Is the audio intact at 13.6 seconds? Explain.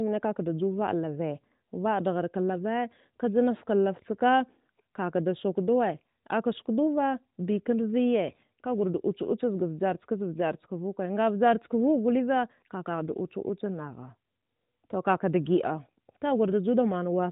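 Yes, the audio is intact at 13.6 seconds, with the speech carrying only the narrow, band-limited sound of the AMR narrowband mobile codec it passed through, and nothing breaks or distorts at that moment.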